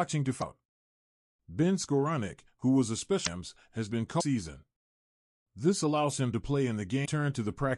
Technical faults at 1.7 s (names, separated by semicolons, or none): none